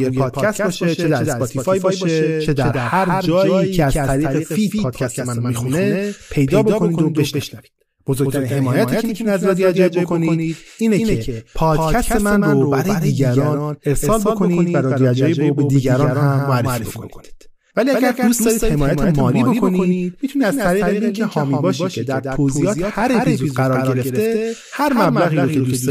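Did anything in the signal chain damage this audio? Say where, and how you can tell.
Yes. A doubled audio track runs through the whole speech clip: a second, full-band copy trails the original by roughly 150 ms at about 5 dB lower, with no decay or room colour. This is likely a driver or capture-path fault, recording the same signal twice via a slower route.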